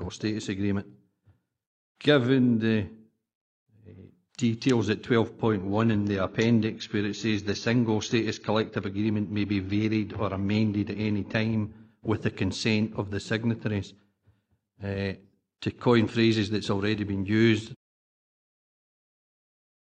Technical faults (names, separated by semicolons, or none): adaptive stream at a lower bitrate